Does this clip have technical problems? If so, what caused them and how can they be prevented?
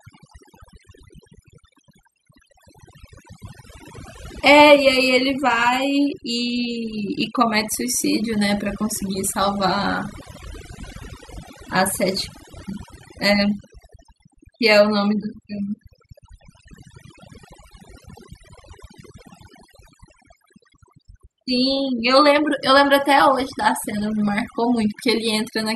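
Yes. Overdone noise removal affects the whole recording: a noise reduction stage set too strong cuts individual frequency bands whenever they sit near its noise estimate, leaving twinkling specks in near-silent gaps. Prevent it by applying gentler reduction settings.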